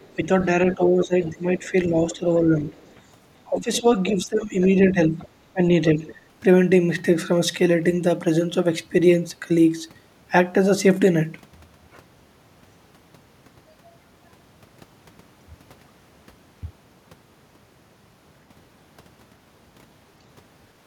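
Faint scraps of a second voice surface at 0.02–0.15 s, 0.72–1.3 s, 2.8–2.95 s, 3.75–4.66 s, 5.19–5.28 s and 6.09–6.15 s. The longer stretches sit only about 20 dB below the talker, and the brief ones lower, about 25 to 35 dB down. This is the other side's voice leaking through, likely loudspeaker playback that the echo canceller failed to remove. Overlapping these, from 0.16 to 2.75 s and from 3.49 to 6.03 s, the talker's speech repeatedly sinks, by up to about 10 dB and then about 15 dB, for roughly a second in total each time. That is speech suppressed in double talk, likely the canceller turning down its own talker while the far end spoke.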